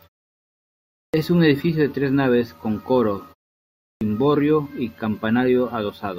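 At 1.09 s, after about a second of silence, the speech returns with its onset missing. This is a clipped start after a pause. The output device dropped into a low-power state during the quiet and needed time to wake. About 46 ms went missing, so "un edificio de tres" starts abruptly, without its first sound. It happens again at 3.97 s, after a 0.71 s pause, this time losing about 41 ms.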